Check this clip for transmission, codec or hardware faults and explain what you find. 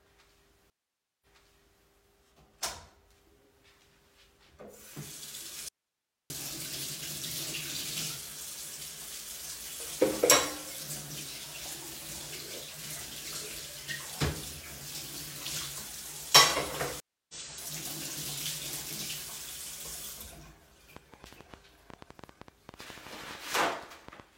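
There are four faults here, of three kinds, in what is a recording of everyday sounds.

Stream reconnect, twice. At 0.7 to 1.86 s the link drops, the player goes quiet for 0.51 s, restarts its decoder and picks up 0.65 s earlier. At 17.0 to 17.34 s it goes quiet for 0.29 s and resumes roughly a fifth of a second later.

Audio dropout to a faint residue, 5.69 to 6.30 s. The sound cuts abruptly to bare hiss around 50 dB down for about 0.62 s, likely because the signal was lost while the downstream path stayed live.

Train of clicks, 20.97 to 24.21 s. Around thirty similar pops land unevenly at about 9.3 per second, peaking roughly 10 dB above the sound. That's likely interference or a faulty connection or power supply.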